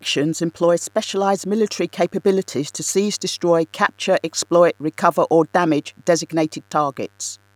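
A steady, raspy buzz runs under the speech for its whole length, roughly 40 dB below it. This is mains buzz at 50 Hz: switching spikes from a dimmer, rectifier or unshielded cable enter twice per cycle, spreading harmonics up into the kilohertz range.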